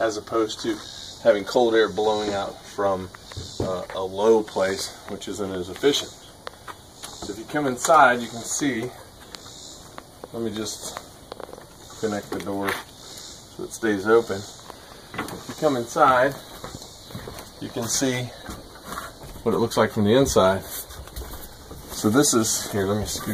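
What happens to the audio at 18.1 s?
Nothing goes wrong at 18.1 s; the audio plays through that moment intact, with no dropout, click or other disturbance.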